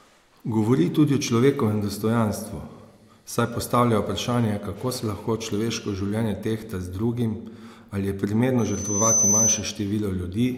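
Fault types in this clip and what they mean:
Loudspeaker feedback squeal: the microphone is hearing the loudspeaker it drives, and at one frequency the loop gain goes past unity, so that frequency keeps feeding on itself. In this speech clip a single tone near 6.1 kHz swells over about half a second from 8.58 s and holds until 9.67 s, ending up a few decibels above the speech. Its steady pitch and self-sustaining growth set it apart from a fixed electrical whine or hum.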